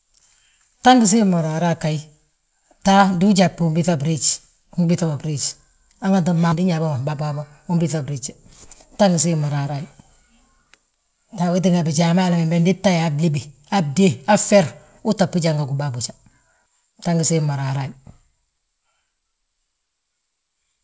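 At 6.52 s, right after "biiŧa mo briiji hanganti", the speech lurches forward with no gap or fill. About half a second of audio is gone, and the two sides are butted directly together. This is a skip ahead: a stretch of incoming audio was discarded, in transit or when the jitter buffer overflowed, while later audio was already queued. Playback jumped straight to it, and the delay shrank by roughly that half second.

From 7.09 s to 7.95 s the speech sounds slightly rushed, running about 6% fast while the pitch stays put. This is a jitter buffer speed-up. The buffer was still holding more audio than its target, so the receiver trimmed out short slices, each one or a few pitch periods long, many times in succession. Together they removed roughly 70 ms and pulled the latency back down. Through all of this the sound is band-limited with nothing above 8 kHz, consistent with a wideband call codec such as G.722 at 64 kbps.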